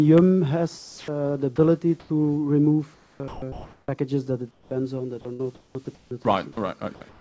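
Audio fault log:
0.78–2.10 s, 2.94–3.91 s and 4.51–7.20 s, sound chopped by the voice detector: each stretch keeps cutting out and snapping back, with the gaps filled by a smooth synthetic hiss, about 0.42 s, 0.76 s and 0.91 s replaced in turn. The likely cause is the sender's voice detector switching transmission on and off, with the receiver padding the gaps with comfort noise. All of it is capped at 8 kHz by the G.722 call path.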